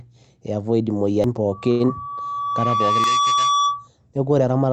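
At 1.24 s the speech skips, losing roughly a fifth of a second with the two sides butted together, likely audio missing between chunks at boundaries 2.0 s apart. From 1.52 s a loudspeaker feedback squeal at 1.2 kHz builds over about a second and a half to roughly the level of the speech, the microphone-loudspeaker loop exceeding unity gain at that frequency, and it runs until 3.88 s. Under it, a short stall from a late packet at 1.71 s holds the last sound for 83 ms as the jitter buffer empties, with nothing lost. Then a short concealed packet loss at 1.86 s replaces 60 ms of missing audio with 24 ms of extrapolated fill, heard as a brief smear. At 3.04 s a second skip of similar length follows, 1.8 s after the first, fitting the same chunk-boundary pattern. The call passed through Opus, whose band limit is 8 kHz.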